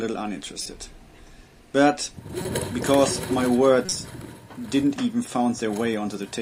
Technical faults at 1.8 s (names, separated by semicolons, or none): none